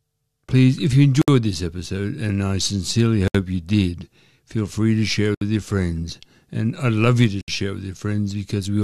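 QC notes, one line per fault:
1.22–1.28, 3.28–3.35, 5.35–5.41 and 7.41–7.48 s, gap at a join of encoded pieces: the audio was encoded in 2-second pieces and joined without trimming each encoder's start-up delay and last-frame padding. This leaves 64–67 ms silences with smeared edges. The first falls after "if you" and the speech resumes exactly where it stopped.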